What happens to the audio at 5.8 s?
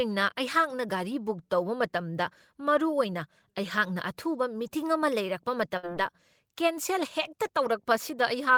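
At 5.77 s there is a burst of packet loss lasting until about 5.86 s. Several packets in a row never arrived in time. The receiver filled the gap by stretching the last sound it had, for about 55 ms, and faded it down. That patch is heard as a brief held buzz or dimming hiss. The speech then picks up again, but about 60 ms of it is gone, so it jumps slightly ahead.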